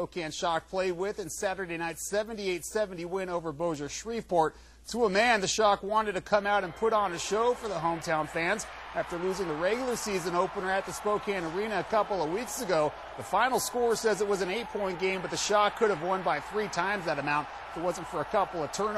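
No faults are audible anywhere in the audio.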